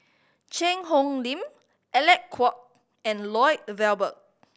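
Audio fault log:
No faults heard in this speech recording.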